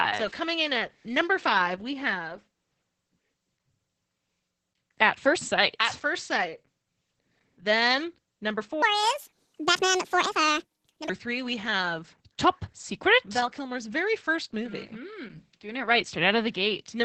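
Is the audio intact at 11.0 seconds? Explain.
No. At 11.0 s the audio is inside a section at the wrong speed, running from 8.82 to 11.09 s. The likely cause is an editor or player fitting this stretch to the wrong clock, so it plays back 1.71 times faster than it was recorded. Because speed and pitch move together, the speech here sounds hurried and raised by roughly ten semitones, then drops back to normal just after 11.09 s.

The whole clip, including this moment, also carries heavy damage from Opus voice compression at 10 kbps. At that rate the encoder runs its SILK linear-prediction coder in wideband mode, which limits the audio to about 8 kHz and codes the excitation coarsely in 20 ms frames. The speech therefore sounds muffled and hoarse with a robotic edge, and the sped-up section carries the same coarse texture.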